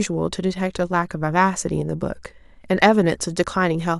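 No technical faults can be heard anywhere in this recording.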